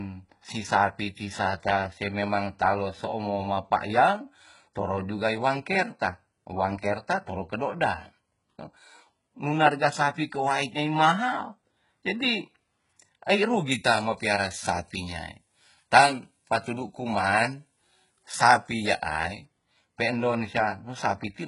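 HE-AAC compression runs through the whole clip. The speech carries heavy codec damage, and the spectrum stops dead at about 11.1 kHz. The treble below that limit is not the original signal. It was rebuilt from copies of lower bands and shaped only by a coarse envelope, so its harmonics fail to line up with those underneath, and s sounds come out gritty and metallic. The likely cause is HE-AAC v2 at a very low rate, around 12 kbps.

Pre-emphasis left on affects 13.71 s to 19.45 s. The treble boost that fits the standard FM 75 µs curve was applied, but the matching de-emphasis was never applied afterwards. High frequencies therefore stand about 13 dB too strong at 10 kHz relative to 1 kHz, which makes this stretch of speech sound thin, bright and sibilant.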